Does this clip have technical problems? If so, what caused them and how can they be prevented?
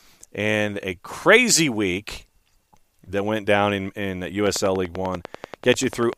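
Yes: a train of clicks starts right after "went down in in" at 4.47 s and lasts to 6.14 s. About twenty regular clicks arrive at 10.2 per second, peaking roughly 10 dB above the speech. A waveform would show evenly spaced sharp spikes, and a spectrogram would show thin full-height vertical lines. Such similar, periodic pulses likely come from electrical interference or a faulty connection or power supply. Moving the recorder away from other equipment, using shielded cables, or checking connections and the power supply should prevent it.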